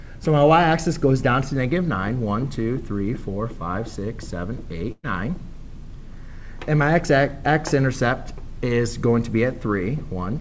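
At 4.92 to 5.05 s, a burst of packet loss removes about 120 ms of audio. The receiver stretches the preceding sound for about 113 ms, turning it down as it goes, then leaves about 30 ms of silence before the audio resumes further on. On a spectrogram, this appears as a smeared, fading band ending in a blank strip. The waveform shrinks to a flat line. Across the whole clip, the spectrogram also stops at 8 kHz, which fits the G.722 codec on the call path.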